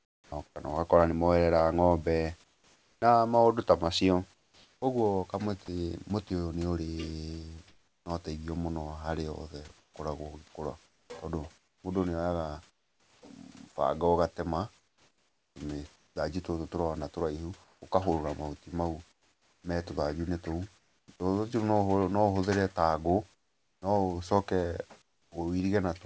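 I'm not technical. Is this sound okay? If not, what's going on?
No. From the start to about 21.1 s the speech sounds choppy, with quiet syllables and word edges clipped. This is sound chopped by the voice detector: the sending side likely kept switching off, and about 5 seconds were filled with artificial hiss.

From about 23.3 to 25.3 s, the natural background is briefly swapped for a flat, featureless hiss. This is comfort noise in place of the background: the sender likely paused transmitting, and the receiving end filled the gap with synthetic noise.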